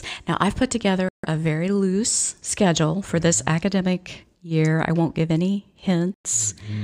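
At 1.09 s the speech drops out to dead silence for about 150 ms, then comes back in, and the same thing happens again at 6.14 s with a gap of about 100 ms. These look like a Bluetooth stall: radio interference likely held up packets, so the headphones' buffer emptied and playback simply halted until the resent packets landed. You hear clean cuts to nothing rather than crackle or distortion.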